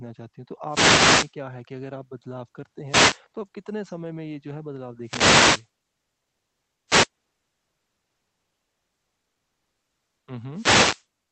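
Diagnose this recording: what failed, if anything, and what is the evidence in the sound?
Wireless microphone noise hits in the analogue radio link: static swishes at 0.67–1.34, 2.84–3.22, 5.01–5.69, 6.87–7.09 and 10.51–11.06 s as RF fades raise receiver hiss. Unlike codec dropouts, the noise grows rather than the speech vanishing.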